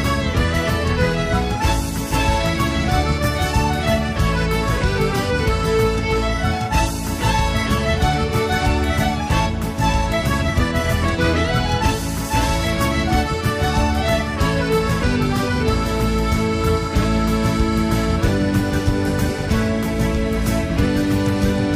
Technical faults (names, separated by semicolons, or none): none